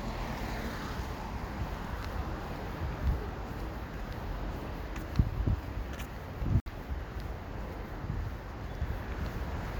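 The clip is a recording of everyday sounds with one fault. At 6.60 s the audio cuts out and stays silent until 6.72 s. When it returns, it does not pick up where it stopped. It has moved ahead, as if it kept playing during the gap. About 61 ms of material is simply missing, which fits a handful of lost wireless frames. This points to a Bluetooth dropout, likely from packets that reached the headphones too late and were discarded.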